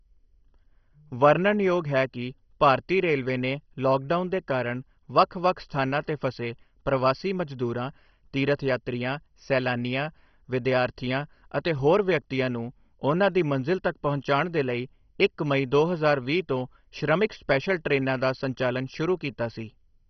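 Throughout this speech, MP2 compression damage is heavy: nothing above about 6.1 kHz, flickering bands and gurgling granular distortion, unlike smooth low-pass dullness, which fits a 32 kbps rate, likely from low-rate encoding.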